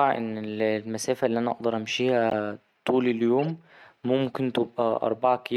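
At 2.30 to 2.32 s, after "اللي أنا أقدر", a corrupt frame decoded gives a loud, single-frame chirp. At 3.40 to 3.48 s, a quieter burst spans about four damaged frames.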